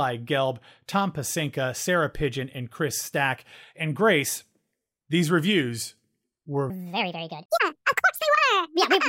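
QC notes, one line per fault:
6.7–9.08 s: section at the wrong speed. After "these reviews were" the speech runs 1.63 times too fast and nearly ten semitones higher, likely from playback on the wrong clock.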